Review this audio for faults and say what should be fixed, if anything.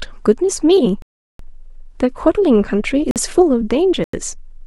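Compressed frames skipped: at 0.85–0.87 s and at 3.60 s, the decoder lost or rejected what sounds like a single frame, so playback jumps ahead by roughly 20 ms of speech. To prevent it, protect the stream against corruption in storage or transmission, and have the decoder conceal damaged frames rather than drop them.

Block of digital silence: the output buffer was likely left as zeros at 1.02–1.39 s (372 ms, which fits a 16384-sample buffer at 44.1 kHz), at 3.11–3.16 s (47 ms), and at 4.04–4.13 s (93 ms, which fits a 4096-sample buffer). Each block is an abrupt hole in the speech, and the longest is a dropout. To prevent it, give the audio thread enough processing headroom or buffer margin so that it always fills its output in time.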